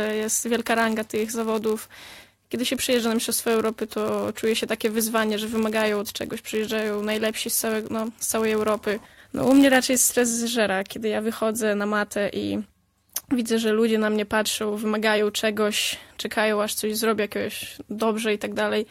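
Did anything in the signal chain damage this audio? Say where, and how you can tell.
Yes, at the driver or buffer stage, through a block size mismatch (padded) from the start to about 10.33 s. A steady buzz at 91.5 Hz sits under the audio there, and the material runs at 0.996x speed with its pitch essentially unchanged. One stage is handing over blocks slightly shorter than the next one reads, so each block gets a short run of zeros appended. Those regular gaps produce the buzz at the block rate and stretch playback by that small ratio.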